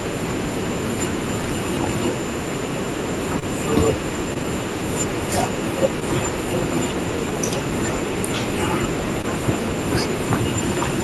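At 3.39, 4.34, 6.00 and 9.22 s the speech has short concealed packet loss: a few hundredths of a second arrived too late, and the receiver extrapolated the preceding sound before blending back. The result is a brief smear or wobble, not a silent gap or hard click.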